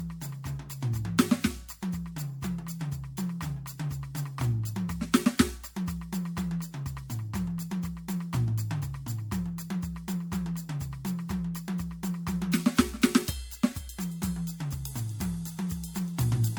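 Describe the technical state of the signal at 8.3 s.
At 8.3 s the music carries generation loss, present across the whole clip rather than at this moment alone. The timbre is swirly and hollow, with smeared transients and blurred attacks, more degraded than a single encode would leave. The likely cause is repeated lossy encoding, about seven passes, consistent with MP3 near 96 kbit/s. Each pass requantises on a shifted frame grid, so noise and spectral holes accumulate. Content extends to about 20 kHz.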